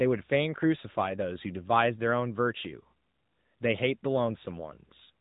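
Speech throughout shows AMR narrowband mobile codec damage: a flat spectrogram ceiling at 3.8 kHz and a plainly buzzy, synthetic timbre that fits a mode near 10 kbps.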